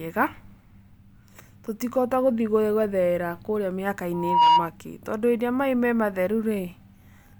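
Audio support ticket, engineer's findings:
Single tone swelling to a squeal, 4.13 to 4.69 s, after "tũtikũhota gũthiĩ gwetherera kũrĩa". Loudspeaker feedback squeal: mic picking up its own speaker, loop gain above one at 954 Hz, builds over roughly 0.3 s, about 10 dB over speech.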